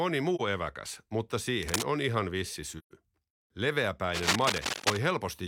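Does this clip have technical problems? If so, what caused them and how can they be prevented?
Yes. The speech has two kinds of fault.

AAC frame loss with muting occurs at 0.35–0.41 s, just before "eväkäs mutta", and again at 2.78–2.92 s, right after "on ihan vissi". The decoder zeroed the missing spectrum, and the overlapping transform windows taper the sound down and back up. Each gap is a soft-edged dropout. The first gap lasts about 43 ms, consistent with one lost frame. The second lasts 128 ms, consistent with three consecutive frames. Prevent this with a more robust transport, such as retransmission, forward error correction or larger jitter buffering, or with decoder-side concealment in place of muting.

Cable scratch noise appears at 1.62–1.83 s, between "eväkäs mutta" and "on ihan vissi", and again across 4.14–4.99 s. It is a dense, irregular crackling and rustling at roughly the same level as the speech, so it competes with the speech rather than sitting underneath it. 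The likely cause is a worn cable, connector or control being moved, which makes the contact resistance fluctuate rapidly during the motion. Prevent this by replacing or cleaning the suspect cable and connectors and securing them so they are not disturbed while recording.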